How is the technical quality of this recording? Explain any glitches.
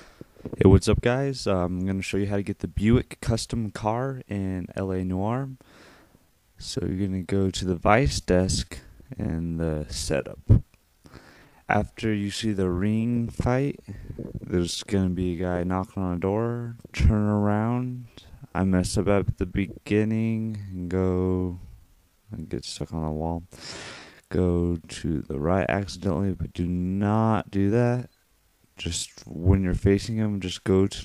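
The recording has one fault, a time-stretched section that runs from 6.21 s to the end of the clip. At that point the pace drops abruptly to about 0.736 times the original speed while the pitch stays unchanged. The likely cause is software lengthening the audio to fit a target duration, repeating short segments rather than resampling. The slowed portion drags all the way to the end.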